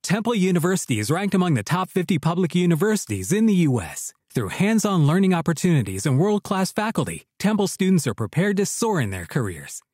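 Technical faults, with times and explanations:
No technical faults can be heard anywhere in this speech recording.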